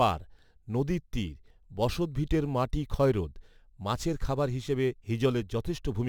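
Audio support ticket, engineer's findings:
Crude rate conversion, throughout: gritty fizz on loud, bright speech. Unfiltered nearest-sample 44.1 to 48 kHz, repeating samples; error about 30 dB down, stray inharmonic lines on spectrogram.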